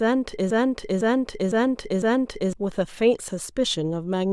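At 0.51 s the speech catches in a broken-record loop: a half-second fragment, about 0.51 s long, repeats exactly four times back to back until 2.53 s. It's likely a stalled player or stream resending its last chunk, so whatever should have played there is gone.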